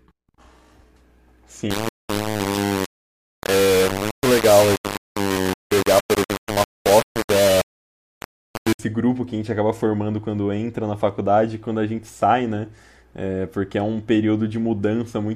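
From 1.71 to 8.79 s, the speech was likely rounded to 3 bits without dither, causing harsh grainy distortion nearly as loud as the speech itself.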